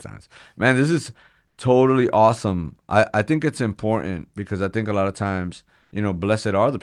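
From 5.81 to 5.91 s, just after "a lot of times", the background gives way for about 100 ms to a steady, featureless hiss, roughly 1 dB different in level. This is comfort noise in place of the background, likely from Opus discontinuous transmission filling a pause with synthetic noise.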